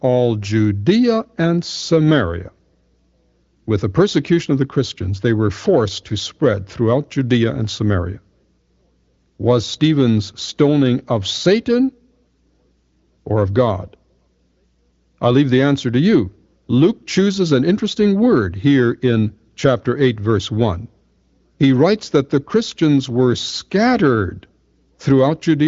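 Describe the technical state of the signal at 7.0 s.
At 7.0 s the signal is intact, with the speech carried cleanly through the AMR wideband (HD Voice) codec at 23.05 kbit/s and the band ending around 7.5 kHz as that path would give.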